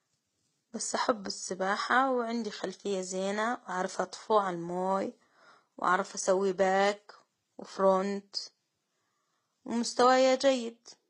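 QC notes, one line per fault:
Throughout: transcoding between lossy codecs. The speech has nothing above 11 kHz and carries two kinds of coding damage at once: swirly, smeared treble alongside a thin, synthetic top-end sheen. This is likely a Vorbis encode at a low bitrate re-encoded to HE-AAC at around 24 kbit/s. The second codec wastes bits on the first one's artefacts. Unlike a single low-bitrate encode, the flaws do not share one consistent character.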